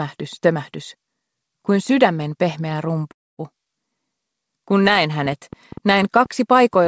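At 3.12 s the sound stalls until about 3.40 s, which is a call audio freeze. There's a very brief smear of the last sound, then roughly a quarter second of silence before things pick up exactly where they stopped. Nothing is skipped, but everything afterwards lands about 265 ms late. That's likely packets held up in transit, draining the jitter buffer. The call path itself, with its G.722-style cutoff at 8 kHz, sits underneath it all.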